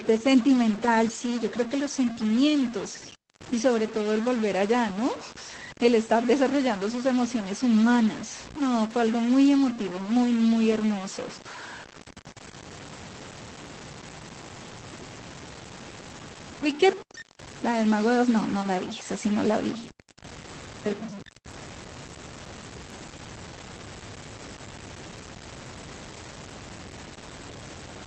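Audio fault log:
Throughout: stuck bit. Distortion rides on the speech, and pauses fill with hiss. A data bit likely stuck at one value causes it.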